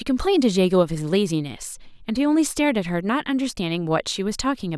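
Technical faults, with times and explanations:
No technical faults are audible.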